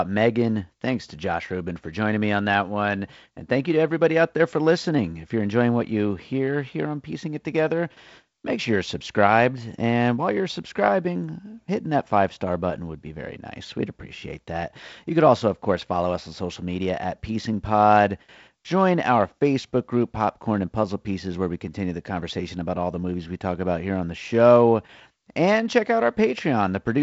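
No technical faults can be heard anywhere in the speech. It carries G.722 wideband telephone coding at 48 kbit/s, with nothing above about 7.7 kHz and light coding noise from the reduced bits in the lower band.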